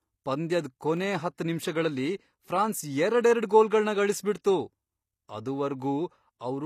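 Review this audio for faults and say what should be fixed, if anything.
Throughout the speech the treble has a synthetic, gritty quality, with s sounds turning metallic and lispy, and nothing is present above 15 kHz. This is plainly audible damage from what is likely HE-AAC compression. The codec coded only the lower spectrum and rebuilt the highs by copying lower bands upward under a coarse envelope, so the upper harmonics do not line up with the real ones. The degree of damage fits a bitrate around 24 kbps. To prevent it, encode at a higher bitrate or with plain AAC or a lossless format.

At 0.97 s there is a single tick where the audio drops to digital silence for about 0.67 ms. A block of samples was replaced by zeros, which fits a 32-sample block that was not filled in time. The hard cut to silence and back, with no fade, produces the tick. Because the hole is so short, it is heard as a tick rather than a gap. 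To prevent it, give the processing path enough buffer headroom so output blocks are always filled before playback.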